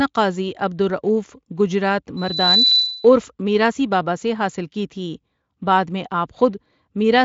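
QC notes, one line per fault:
2.17–3.14 s, loudspeaker feedback squeal: Right after "عبدالرؤف گجرات" a pure tone at 4 kHz appears. It swells over roughly a third of a second and settles at about 5 dB above the speech. It holds until "میراثی باباسے حاصل کی" resumes. The microphone was picking up its own loudspeaker, and at 4 kHz the loop gain passed one, so that frequency fed itself. It stands clearly above the Speex-coded speech, which tops out near 7.6 kHz.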